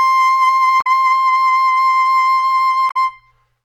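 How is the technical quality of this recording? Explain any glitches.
The music plays cleanly except for two short glitches from damaged data in a compressed stream, at 0.78–0.87 s and 2.87–2.97 s. In each case part of the encoded data reaching the decoder was wrong, so it misread or rejected those frames, lost sync and searched for the next valid frame header. Each event lasts under a tenth of a second and sounds like a chirp, squawk, click or short hole cutting across the music.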